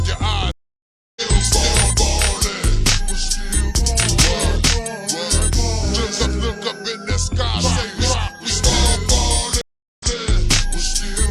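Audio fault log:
0.51–1.22 s, stream reconnect: the connection drops and you get 648 ms of dead air, then a fresh decoder picks up mid-stream with a short muted or faded start. It comes back roughly 0.7 s further on, so a chunk of the sound is simply skipped.
9.61–10.14 s, stream reconnect: the same break with a 387 ms gap, but this time the server resends a burst, so playback resumes 139 ms earlier and that bit repeats.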